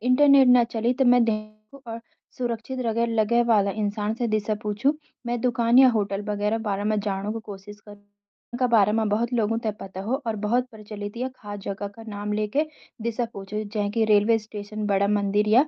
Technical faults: long network dropout

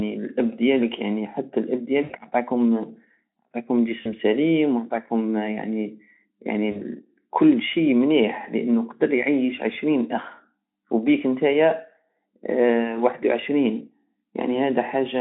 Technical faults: VoIP packet loss concealed by the speech codec

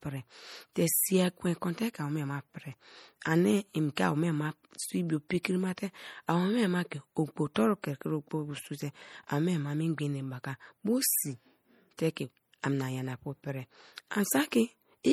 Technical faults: MP3 compression; pre-echo

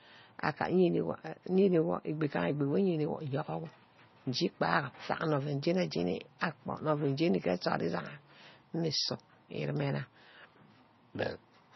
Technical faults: transcoding between lossy codecs

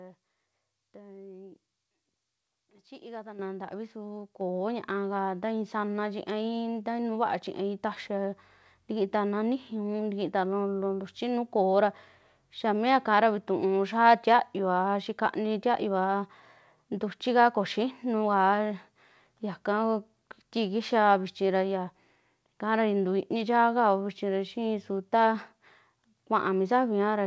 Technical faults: microphone volume stepped up

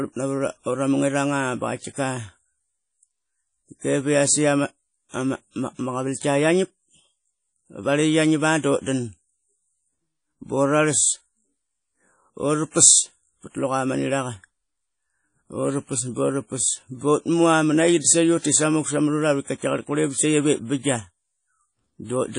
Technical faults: WMA compression

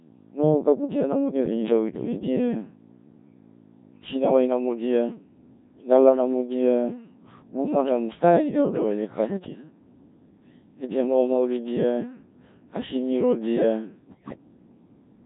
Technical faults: Codec 2 vocoder; bit errors on digital voice radio

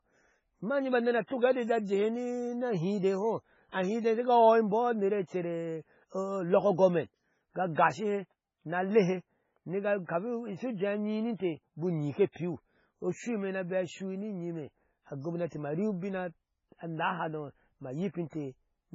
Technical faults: MP3 compression; pre-echo

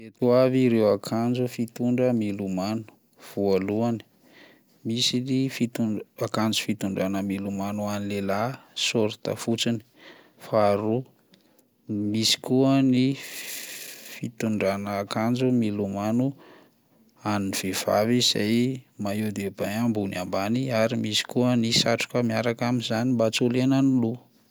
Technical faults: none

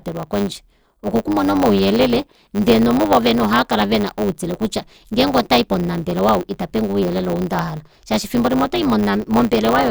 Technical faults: block size mismatch (truncated)

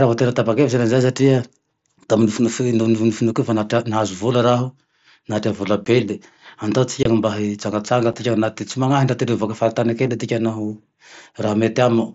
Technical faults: unconcealed Bluetooth headset packet loss

